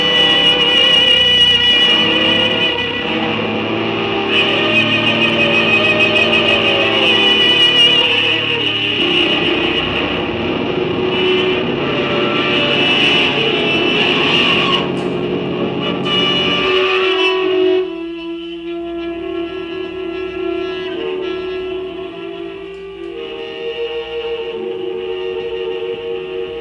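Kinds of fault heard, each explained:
No kinds of fault are heard in this clip.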